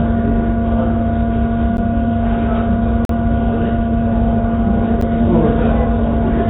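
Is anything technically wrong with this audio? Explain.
Yes, there are three blocks of digital silence. At 1.77 s and 5.01 s the audio drops out for about 11 ms, which fits a 512-sample buffer not getting filled in time, so you hear a quick tick. At 3.05 to 3.09 s a roughly 43 ms gap, consistent with a 2048-sample block, opens as a short hole.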